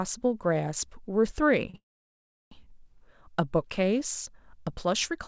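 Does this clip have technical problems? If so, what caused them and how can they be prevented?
Yes. A short stall from a late packet runs from 1.70 to 1.76 s. The jitter buffer ran dry, so the receiver held the last sound for 38 ms, then resumed without losing anything. A slightly larger jitter buffer, or an adaptive one with more headroom, would absorb a delay this small.

A call audio freeze follows from 1.76 to 2.53 s. The held sound fades into about 0.69 s of silence, adding a 757 ms gap before the audio resumes where it stopped. The likely cause is packets stalled in transit. A steadier network path, such as wired instead of congested Wi-Fi, or traffic prioritisation for call packets, would help prevent it.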